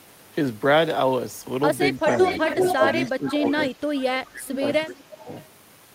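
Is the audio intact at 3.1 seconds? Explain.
No. From 2.05 to 3.69 s there is an echo leak: a copy of the speech returns about 340 ms late, at roughly the same level, likely from an echo canceller failing to remove loudspeaker pickup. Overlapping it, from 2.77 to 5.29 s, the speech is suppressed in double talk. It dips in pieces by around 15 dB, about one and a half seconds in total, likely because the canceller turned down both talkers when they spoke at once.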